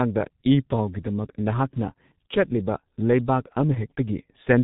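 From start to finish the speech has passed through the G.723.1 codec, an old low-rate telephony coder that models the voice in coarse 30 ms frames, with heavy damage consistent with a 6.3 kbit/s stream. Nothing survives above 3.8 kHz, so the top of the voice is gone and it sounds muffled. Because the voice model updates so slowly, the tone turns hoarse and consonants smear into one another instead of landing crisply.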